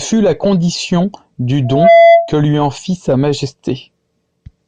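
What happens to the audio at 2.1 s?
A 676 Hz tone swells over roughly a third of a second to well above the speech, from 1.65 to 2.35 s. This is loudspeaker feedback squeal, where the microphone re-amplifies its own loudspeaker.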